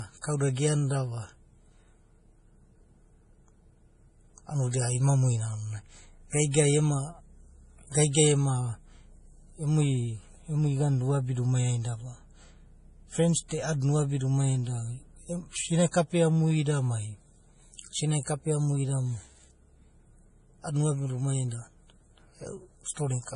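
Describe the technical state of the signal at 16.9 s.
At 16.9 s the speech carries heavy MP3 compression artefacts, present across the whole clip. The likely cause is a starved bitrate, around 32 kbps. Nothing sounds above 10.5 kHz. Weak frequency lines flicker between frames, giving a watery, swirly texture and smeared attacks.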